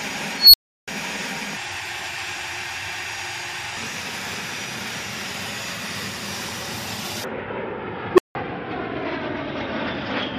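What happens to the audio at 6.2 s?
Nothing goes wrong at 6.2 s; the audio plays through that moment intact, with no dropout, click or distortion.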